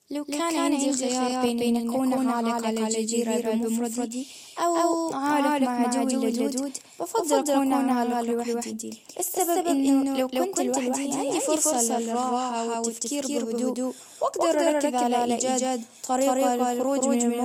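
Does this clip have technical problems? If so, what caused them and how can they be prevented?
Yes. Throughout the speech, every sound repeats about a fifth of a second later at equal loudness: a doubled audio track, likely captured twice through a second, slower path. Route the input once and mute any duplicate monitoring or loopback feed.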